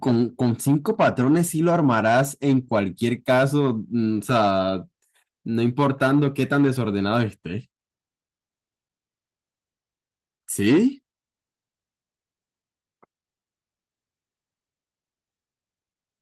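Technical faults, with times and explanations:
No technical faults found; the speech carries light Opus coding at 24 kbps in hybrid mode, with full bandwidth kept.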